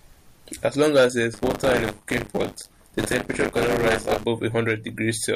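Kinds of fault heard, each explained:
Buffer tearing: The application filling the playback ring buffer and the hardware draining it have drifted out of step, so their positions cross within every period. In this speech, from 1.33 s to 4.24 s, about a fifth of each period carries stale audio from roughly 40 ms earlier, spliced in with hard edges. The result is a continuous robotic rattle at 100 Hz, which points to a period of about 10 ms, and it sounds only while speech is present.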